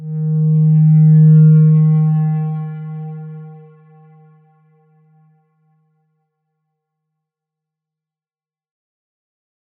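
Nothing here jumps out as a technical fault, so there's really nothing to flag in this one.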